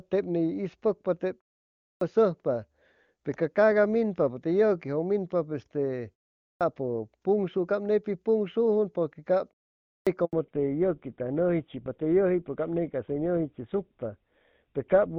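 The playback device appears to power down its output during short pauses and needs a moment to wake before sound can pass again, producing a clipped start after a pause three times. At 1.86 s, after a pause of about 0.53 s, roughly 150 ms is swallowed. At 6.47 s, after about 0.39 s of quiet, about 140 ms goes missing. At 9.93 s, after about 0.48 s, roughly 140 ms is lost. Each time, the speech bursts in abruptly with its opening sounds cut away.

From 10.25 to 10.33 s comes a handover gap: the call was passed from one network link to another, and for about 80 ms no speech frames reached the receiver. The speech dies away almost instantly and leaves a hard hole of silence until the new link picks up. Whatever was said inside that window simply isn't there.

At 10.33 s, straight after the handover, the call shows a fallback to narrowband. Until then the wideband HD Voice codec was carrying the speech cleanly, in keeping with a high AMR-WB rate. 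Afterwards everything above 4 kHz is gone, which fits a switch to the older GSM full-rate codec. For the remaining five seconds the speech sounds duller and boxier, with a rougher, grittier texture and less crisp consonants.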